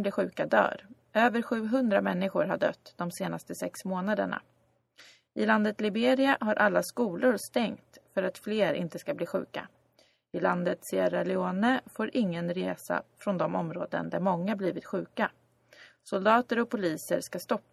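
No technical faults can be heard anywhere in the recording.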